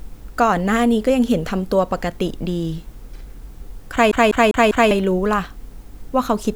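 From 4.11 to 4.91 s the speech sticks like a CD stuck on one turn: a scratch keeps throwing the laser back, so a roughly 199 ms slice repeats four times with brief mutes. On a waveform it shows as identical blocks separated by thin silent gaps.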